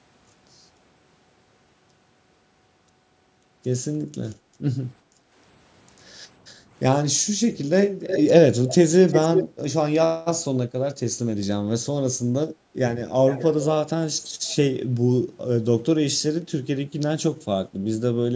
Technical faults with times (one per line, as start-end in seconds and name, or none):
5.03-5.31 background gated by the echo canceller
8.07-8.23 echo leak
8.66-8.75 echo leak
9.08-9.47 echo leak
13.27-13.44 echo leak
14.48-14.55 echo leak